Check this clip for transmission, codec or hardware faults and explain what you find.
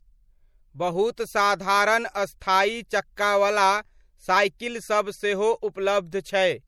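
Two codec faults are audible in the speech.

MP3 compression runs throughout. The encoder likely ran short of bits, a pattern that fits roughly 64 kbps, so weak frequency lines drop in and out between frames. The damage is plainly audible as a watery, swirly texture, with metallic chirps on s sounds and smeared attacks.

Pre-echo occurs at 1.16 s and 2.40 s. In both cases a sharp attack fell late in a transform block, and the codec spread that block's quantisation noise into the quiet moment before it. The result is a brief hiss, about 18 ms and 16 ms long, just ahead of each attack, which then sounds soft.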